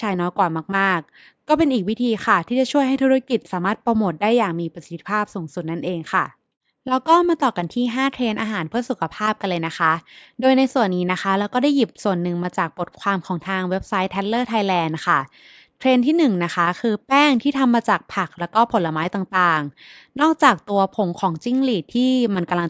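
Speech recording, no technical faults detected anywhere in the clip.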